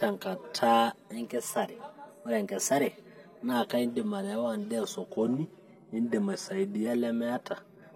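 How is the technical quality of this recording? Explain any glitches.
The recording has clear technical problems. Three kinds of fault affect this speech.

Channel delay (comb filtering) runs throughout. One channel arrives around 5 ms late. Summed to mono, it cancels near 100 Hz and at evenly spaced frequencies above. The speech sounds hollow and phasey.

HE-AAC compression is likely behind the gritty, lispy treble throughout. Upper bands are rebuilt from lower ones, which fits a low bitrate near 24 kbps. Nothing sounds above 15.5 kHz.

A drift correction step is the likely cause of two pitch jumps. From 1.14 to 3.52 s, playback speeds up 5.65%, raising pitch about a semitone. From 5.11 to 6.87 s, it slows 5.65%, dropping pitch about a semitone. Each time, speed and pitch snap back afterward.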